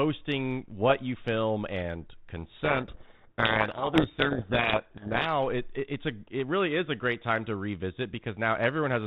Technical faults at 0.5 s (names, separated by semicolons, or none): none